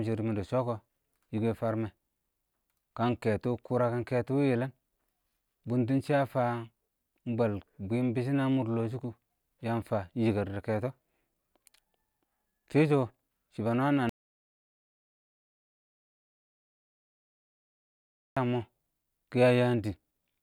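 At 14.09 s the speech cuts off into dead silence, no room tone, until 18.37 s: an audio dropout to silence, likely from the input being lost while silence was recorded.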